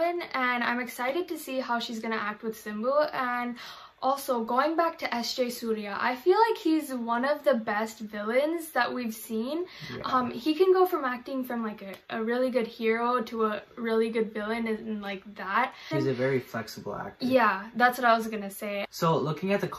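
No technical faults can be heard anywhere in the audio. Nothing in it calls for a timestamp or a fix.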